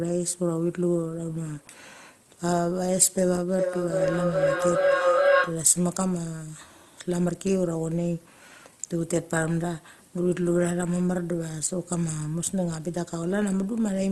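A speech recording carried over a call path, band-limited to about 12 kHz, with a feedback howl from 3.49 to 5.69 s. Sound leaking from a loudspeaker back into a microphone in the same room gains level on each trip, which here takes about 400 ms, building into a tone near 500 Hz that peaks about 5 dB above the speech. On a spectrogram it shows as a bright horizontal band around 500 Hz, while the waveform swells into a dense envelope.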